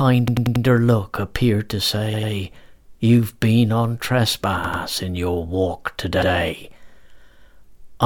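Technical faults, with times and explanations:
0.28–0.65 s (before "look appeared to"), 2.14–2.32 s (after "look appeared to"), 4.64–4.83 s (before "in your walk") and 6.22–6.32 s, repeated buffer: fresh audio arrived late, so playback replayed its last 93 ms block, which fits a 4096-sample buffer. It repeats four, two, two and one extra times respectively, heard as hard-joined stutters.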